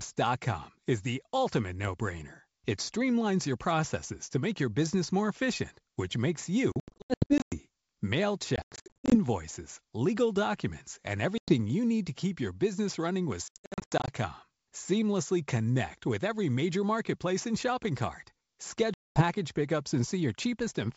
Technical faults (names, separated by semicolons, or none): packet loss on an ADPCM call